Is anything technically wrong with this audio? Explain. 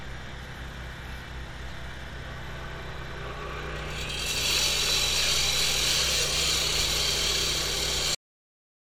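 Yes. At 8.15 s there is a cut-off end: the final buffers never played, so the sound stops abruptly into digital silence without any decay, showing as a flat waveform and blank spectrogram to the end.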